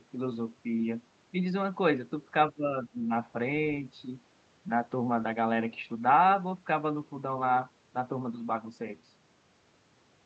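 From 2.51 to 3.11 s, the speech dips. The level falls by roughly 15 dB at its deepest, and the affected moments add up to around 0.4 s within that stretch. This pattern is likely speech suppressed in double talk. Both ends seem to be talking at once. The echo canceller cannot tell the near talker from the returning echo, so it pulls the gain down on both. The call path carries audio up to about 8 kHz.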